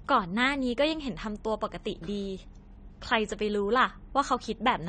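From start to finish the speech is dull and smeared, with nothing above 9 kHz and a warbling, fizzy texture on sustained sounds and sibilants. This is likely AAC compression, with the damage plainly audible and pointing to AAC-LC at a low bitrate of around 32 kbps. The encoder has lowered its cut-off and quantised the spectrum coarsely, leaving gaps. That warble and fizz is what separates it from a plain low-pass filter, which would dull the top end cleanly.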